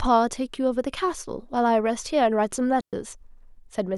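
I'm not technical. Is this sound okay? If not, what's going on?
No, not quite. At about 2.81 seconds the speech suddenly drops out completely for roughly an eighth of a second, coming back at 2.93 seconds. That's a digital wireless dropout: the wireless mic's receiver lost too much of the signal for a moment and simply muted itself. You hear a clean gap of near silence rather than crackle or hiss, and the sound fades out and back in very quickly on either side.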